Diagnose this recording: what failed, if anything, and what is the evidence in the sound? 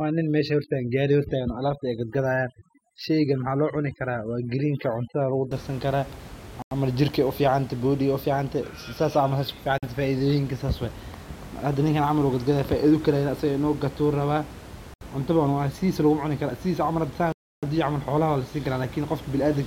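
The first five and a half seconds, from the start to about 5.51 s, show overdone noise removal in the call processing stage. The background drops and breaks up into little twinkling specks. The suppressor was set too aggressively. It switches off individual frequency bands whenever they sit close to its noise estimate, and it takes the quieter parts of the speech with them. After that point the room noise sits about 17 dB under the speech.

Then there are four hard dropouts to silence at playback. The first is at 6.62 s and lasts 92 ms. The second is at 9.78 s and lasts 47 ms. The third is at 14.94 s and lasts 72 ms. The last and longest is at 17.32 s and runs 303 ms. Each time the audio simply stops and then carries on. That points to a likely Bluetooth stall: interference delays packets, the headphone buffer runs empty, and playback waits for the resent data to arrive.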